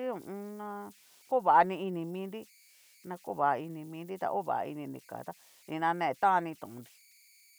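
A speech recording with converter idle tones running the whole way through: a tone around 2 kHz in the pauses and a grainy texture under the speech, sitting about 31 dB below the speech. That's an undithered delta-sigma converter settling into repeating bit patterns whenever the input gets small.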